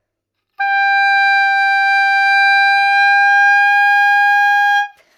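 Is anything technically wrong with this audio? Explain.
No, nothing technically wrong is audible in this audio.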